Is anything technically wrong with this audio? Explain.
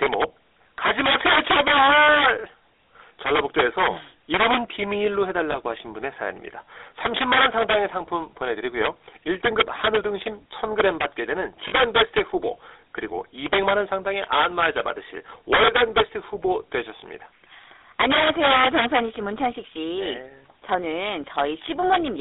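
Yes, there are two problems, both pointing to a GSM phone path.

The whole clip carries the GSM full-rate codec sound. The voice has that buzzy, gravelly texture you get when the vocal tract is modelled and driven by a sparse, regularly spaced pulse train instead of the real excitation. The result fits the 13 kbps full-rate coder. The band is squeezed to roughly 300 Hz–3.7 kHz, so there's no low warmth or top-end air, and the roughness is plainly audible.

There are also lost GSM frames at 5.52–5.56 s, 11.68–11.73 s and 21.62–21.65 s. At each gap the decoder lacks good data, so it reuses the last good frame's settings. That makes the voice hang on a brief, rough, metallic ring rather than cutting to silence. The first and last fit a single dropped frame. The middle one is a bit longer, which suggests two in a row.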